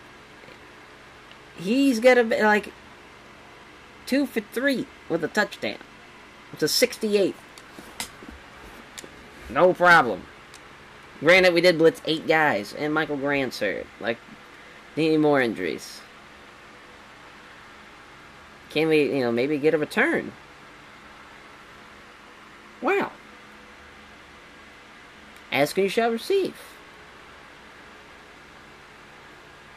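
No technical faults can be heard anywhere in it.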